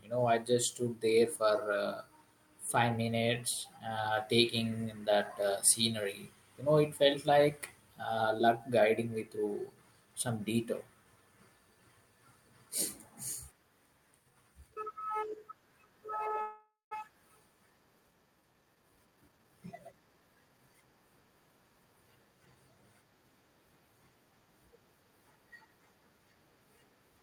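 Speech with a call audio freeze from 16.41 to 16.93 s: the last sound smears into a fading buzz or hiss, then 180 ms of silence, likely from delayed packets draining the jitter buffer. A spectrogram shows frozen, blurred harmonics. From 18.47 to 20.75 s, a jitter buffer speed-up runs the speech at 122% without any pitch change, trimming roughly half a second. The waveform shows compressed syllables.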